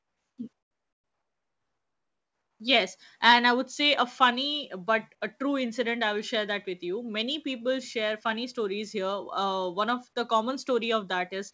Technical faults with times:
0.00-2.60 comfort noise in place of the background
3.26-3.35 microphone overload
3.33 microphone volume stepped down

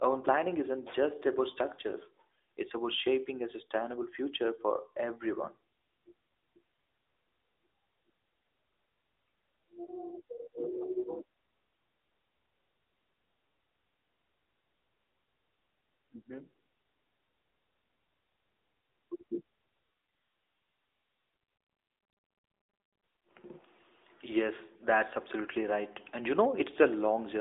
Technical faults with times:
0.00-27.40 AMR narrowband mobile codec

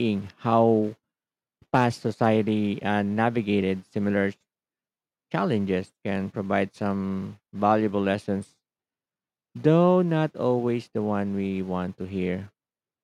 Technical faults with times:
1.74-1.85 hard clipping
2.24 hard clipping

